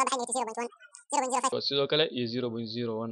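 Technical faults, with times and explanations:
0.0–1.52 s: audio read two samples at a time (double speed). Sample pairs are taken as single frames, so the sound plays at 2x speed, 12 semitones higher.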